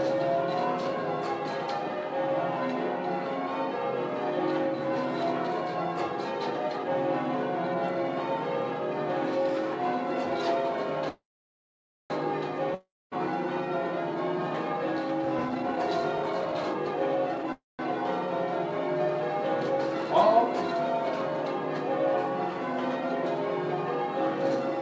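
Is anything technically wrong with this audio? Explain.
Yes. The audio has two call audio freezes, a long network dropout and two jitter buffer speed-ups, heard over a call path whose band ends at 8 kHz, which fits a wideband codec such as G.722.

Call audio freeze at 11.09 to 12.12 s and 17.52 to 17.81 s: the last sound is stretched into a fading buzz, then about 0.88 s and 0.18 s of silence. The likely cause is packets held up until the jitter buffer ran dry. The audio then resumes where it stopped, so 1.01 s and 0.26 s of delay are inserted and nothing is lost.

Long network dropout at 12.74 to 13.13 s: a brief fading continuation gives way to about 0.24 s of silence. The audio then resumes further along, with about 0.38 s of material skipped. The likely cause is packets that never arrived in time to be played.

Jitter buffer speed-up at 15.25 to 15.77 s, running at 133% and removing roughly 150 ms, and at 16.18 to 17.48 s, running at 114% and removing roughly 200 ms. 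The receiver cut out short pitch-period pieces to shed excess buffered delay, so the sound is hurried but keeps the same pitch.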